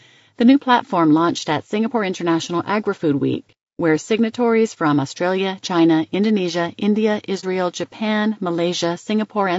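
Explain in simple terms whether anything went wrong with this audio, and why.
The voice sounds rough and grainy all the way through, with a hissy fizz between its tones and a thin, artificial-sounding top end. That's plainly audible damage, likely from low-delay AAC compression, the quick-turnaround codec used on video calls, squeezed too hard.

There's also a brief dropout from 7.40 to 7.44 s, a case of AAC frame loss with muting. One chunk of audio went missing, and the decoder filled it with silence, so the sound fades out and back in over that short hole.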